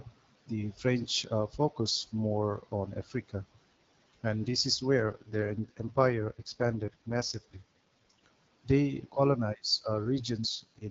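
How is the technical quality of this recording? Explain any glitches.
The recording has two stretches where the speech turns rougher, both from an AMR rate drop. The wideband HD Voice coding around them carries light codec texture.

From 4.98 to 8.26 s, and again from 10.55 s to the end, the speech sounds raspy and synthetic with no gap or loss of bandwidth. This fits a weak link forcing the AMR-WB codec down from 12.65 to 6.6 kbit/s.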